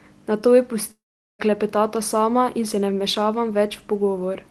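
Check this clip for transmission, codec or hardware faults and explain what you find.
One fault stands out in this speech clip, which is carried over a WebRTC call path with Opus band-limiting it near 12 kHz. From 0.91 to 1.42 s there is a long network dropout, likely from packets no longer arriving. The receiver stretches the last sound into a fading buzz, then near-silence, until "klepetata sama in se". Unlike a brief loss glitch, roughly half a second of speech vanishes for good.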